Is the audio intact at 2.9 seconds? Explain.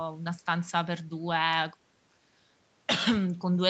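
Yes, the speech is intact at 2.9 seconds, with no dropout, glitch or distortion at that moment.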